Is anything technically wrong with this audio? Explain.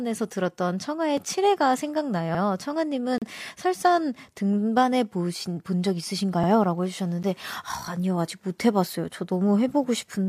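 Yes, this speech has a gap between stream segments at 1.17 s, 3.18 to 3.22 s and 7.23 s. The segment timestamps don't quite meet, so the player fills each hole with silence. You get hard-edged dropouts of about 3, 36 and 11 ms, with no audio missing.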